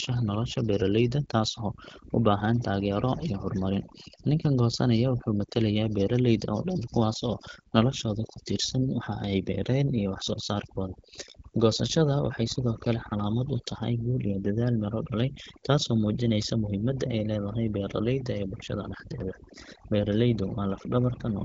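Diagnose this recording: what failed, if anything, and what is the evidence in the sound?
Overdone noise removal in call processing affects the whole speech clip. The gaps drop to near silence with twinkling specks. Bands near the noise estimate are cut hard, taking quiet speech detail with them. A spectrogram shows black pauses with isolated flecks and holes in faint harmonics.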